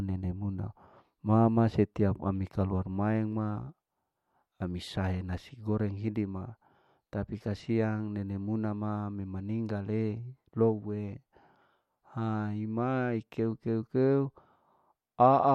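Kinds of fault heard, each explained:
No kind of fault is heard in this speech.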